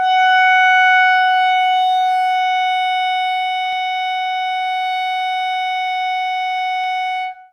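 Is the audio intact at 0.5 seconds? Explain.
Yes, at 0.5 seconds the music plays through cleanly with no dropout, click, distortion or other fault.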